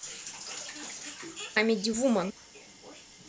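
At 1.56 s and again at 2.30 s the speech jumps forward abruptly: audio missing between chunks. Roughly 150 ms of sound is gone at each point, and the material on either side is butted together with no gap, so the speech skips rather than pausing. The likely cause is a recorder or processor working in 0.5 s chunks that drops a short stretch of input each time it closes one chunk and opens the next.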